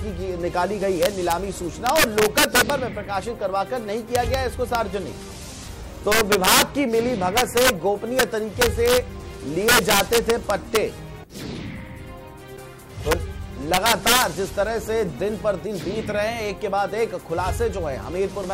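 Integer overflow runs throughout: the signal is pushed about 3 dB past full scale, and rather than being limited, the loudest peaks, around one or two percent of samples, wrap to the opposite sign. Each wrap jumps across the full range, producing sharp, violent cracks on loud moments, harsher than ordinary clipping.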